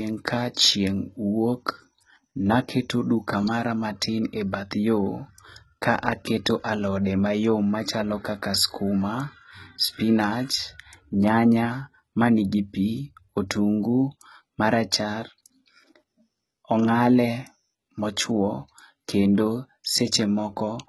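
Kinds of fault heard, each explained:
HE-AAC compression: The likely cause is HE-AAC coding at a very low bitrate, with heavy damage consistent with roughly 16 kbps. Only the lower spectrum was truly encoded, and the treble was rebuilt by copying lower bands upward under a coarse envelope. In this speech, the top end stops dead at 11.8 kHz, and the synthetic treble doesn't match the real harmonics below, so s sounds come out gritty, metallic or lispy.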